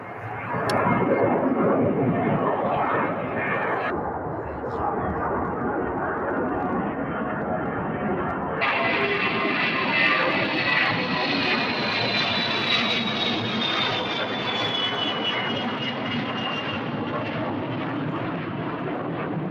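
From the first second to the end, held sounds and decaying tails keep sinking and swelling by about 5 dB, giving a pumping, fluttering, slightly hollow quality while sharp onsets come through intact. This is a noise suppressor applied to music or sounds: a processor tuned for speech treats sustained tones, room ambience and reverb as background noise and pulls them down between attacks, so anything steady gets thinned and unsteady.

From 3.90 to 8.61 s the audio drops into a deep, dragging register, playing at about two-thirds speed and roughly seven semitones lower, then snaps back to normal. This is a section at the wrong speed. Because pitch and tempo move together here, the likely cause is that this stretch was played out against the wrong clock, as when a player or editor assumes the wrong sample rate for one segment.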